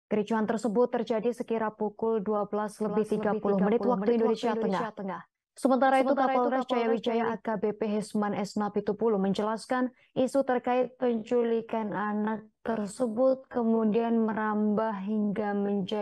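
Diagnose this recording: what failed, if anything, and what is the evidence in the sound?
From 2.88 s to 7.36 s there's a doubled audio track: a second, full-band copy trails the original by roughly 400 ms, sitting about 5 dB down. It has no reverb tail or room colour, and it cuts in and drops out abruptly at those two points. That's most likely a capture or editing stage where the same signal arrived twice, once through a slower path, and got summed.

From 10.72 s through to the end there's a time-stretched section. The pace abruptly drops to about 0.55 of normal while the pitch holds steady, as short pieces get repeated to fill the time. Likely an editing or playback tool stretched that stretch to fit a longer slot rather than resampling it.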